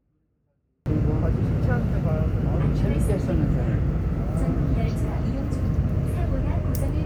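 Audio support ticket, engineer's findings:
24-bit alignment error (too quiet), 0.00–0.86 s. Level about 48 dB down from the start, near inaudible, yet clean: no distortion, no noise burst. Likely cause: capture or format-conversion stage. 24-bit samples in the low bytes of 32-bit words, read as full 32-bit integers; top byte zero, so scaled down by 2^8 per… effectively a fixed ~48 dB loss. Normal level returns after 0.86 s.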